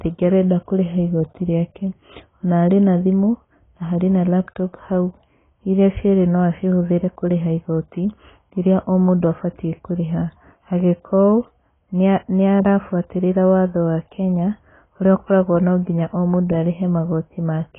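AAC compression damage runs through the whole speech clip, from start to finish. Nothing survives above 3.8 kHz, so the sound is dull and boxy, and the heavy artefacts give it a smeared, warbling, fizzy texture on sustained sounds and sibilants. The likely cause is AAC-LC coding at a very low bitrate, around 16 kbps: too few bits per frame forces the encoder to drop the top band and coarsely quantise what remains.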